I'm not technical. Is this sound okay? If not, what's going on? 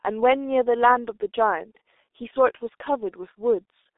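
No. Throughout, the speech passes through a G.723.1 codec, squeezed so hard that nothing above 3.8 kHz remains. Unlike a plain phone line, it also sounds hoarse, with smeared consonants.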